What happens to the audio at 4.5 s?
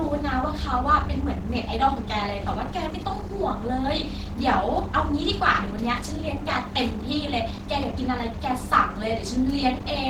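The speech sounds hoarse, grainy and somewhat muffled, and this holds across the whole clip, not just around that moment. The cause is likely Opus compression at a low rate that fits about 16 kbps: in its hybrid speech mode, the encoder fills bit-starved bands with noise instead of real detail.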